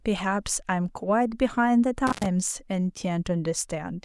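A speech recording with an intermittent contact fault between 2.07 and 2.26 s. The signal path opens for roughly 97 ms, likely from a loose cable or plug, so the sound cuts out with crackle at either edge as the contact breaks and remakes, and faint hiss remains while the line is open. That scratchy onset and offset, and the residual hiss, set it apart from a digital dropout, which falls cleanly to silence.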